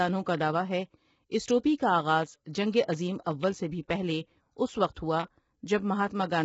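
From start to finish the speech sounds rough and grainy, with noise filling the gaps between harmonics and nothing above 7.7 kHz. That's likely low-delay AAC compression: AAC-ELD's short frames resolve pitch poorly, and heavy damage like this fits a bitrate around 16 kbps.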